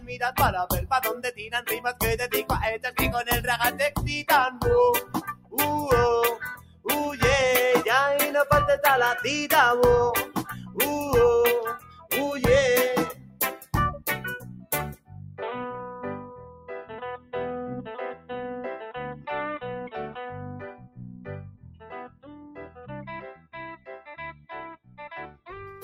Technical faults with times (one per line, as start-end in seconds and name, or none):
0.00-25.84 noise suppressor applied to music or sounds
0.00-2.90 sound cut by the noise suppressor
4.51-5.57 sound cut by the noise suppressor
6.55-6.86 sound cut by the noise suppressor
10.26-10.78 sound cut by the noise suppressor
11.78-12.11 sound cut by the noise suppressor
13.13-19.27 sound cut by the noise suppressor
20.31-25.47 sound cut by the noise suppressor